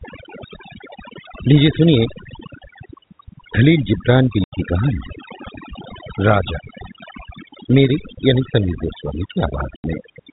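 Overdone noise removal runs from start to finish. A noise reduction stage was pushed too hard, so any frequency band that came close to its noise estimate was pulled far down or shut off entirely. The background collapses into near silence scattered with twinkling specks, and the softer components of the speech are stripped away with the noise. The band is capped at 4 kHz by the telephone coding it passes through.

Packet loss filled with silence occurs at 4.44 s and again at 9.76 s. Each gap is about 80 ms, which fits four lost 20 ms packets. The receiver played silence in their place rather than concealing them, so the speech is abruptly cut by a hole with hard edges on both sides.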